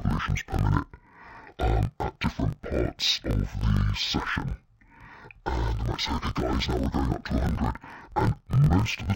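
From start to finish, the speech has an interleaved-audio-read-as-planar fault. Each block of about 21.8 ms holds alternating left and right samples. The player reads the first half as left and the second half as right. Each channel then gets half a block of mixed samples stretched across the whole block, so the voice drops a full octave. The speech sounds doubled and choppy, breaking up at about 46 Hz, the block rate.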